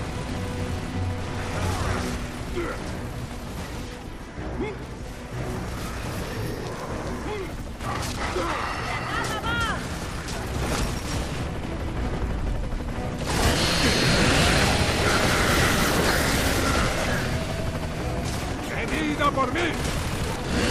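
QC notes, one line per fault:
5.18 to 8.96 s, periodic clock jitter: interference at around 1 kHz wobbles the converter's sampling clock, so every component gains sidebands spaced about 1 kHz either side, strongest on high frequencies, giving a rough, metallic edge that drops away in silent passages.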